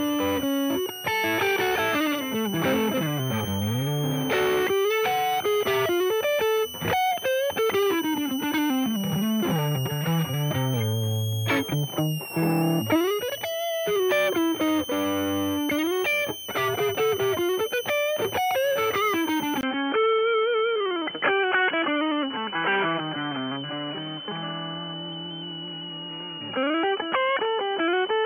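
A high whistle sits under the audio for the whole clip, wandering between about 2.69 and 3.27 kHz around a centre near 3 kHz, roughly 10 dB below the wanted sound. This is a switching supply whistle: a power converter cycling in an audible burst mode, or two converters beating, with the pitch drifting as the load shifts. Unlike mains hum, it sits high in the spectrum, with no low fundamental and no ladder of harmonics. At 19.61 s there is a 20 ms gap, and from then to the end nothing survives above 3.3 kHz. The level stays about the same, but a new noise floor appears roughly 30 dB below the signal. This is an input switched to a poorer device, likely the recording input jumping to another microphone or a headset's call profile. The gap and the changed background separate it from a mere filter or codec bandwidth change, which would cut the top end without bringing in fresh noise. Because the whistle lies just under the new limit, it carries on past the switch.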